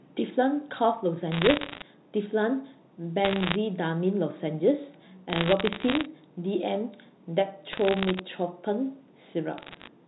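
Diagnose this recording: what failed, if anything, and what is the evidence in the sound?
Sharp ticks and crackle ride over the speech at 1.32–1.82 s, 3.25–3.56 s, 5.30–6.05 s, 7.73–8.19 s and 9.58–9.88 s. These are bit errors on a digital phone line. Flipped bits in the transmitted G.711 stream each corrupt one sample, and hits on sign or high bits click.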